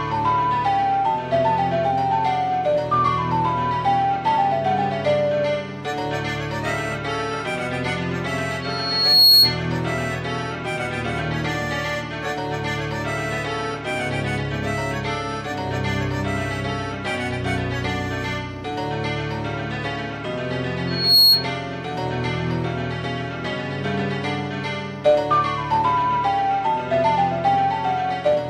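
Loudspeaker feedback squeal hits twice, at 8.62 to 9.60 s and 20.87 to 21.49 s. A mic re-picks its speaker, so a 4.3 kHz tone swells within about a second to roughly 10 dB above the sound.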